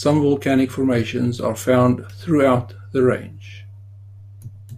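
Speech, with no technical fault to report. Nothing audible points to a problem in how it was captured, processed or delivered.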